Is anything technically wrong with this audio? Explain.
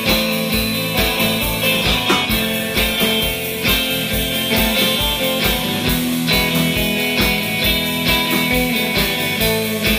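Yes, there's a call bitrate drop from 1.14 to 5.82 s. The bandwidth estimate sagged, so the encoder gets starved and codes coarsely. The sound turns rough and muffled, with the top end gone. It stays worst for about 2.35 s, after a fall from roughly 128 to 25 kbps.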